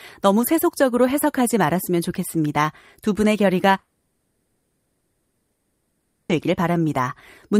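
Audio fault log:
3.79–6.31 s, long network dropout: the sound decays into a fading buzz, then 1.63 s of silence. Likely 2.5 s lost in transit, far longer than a brief concealed packet gap.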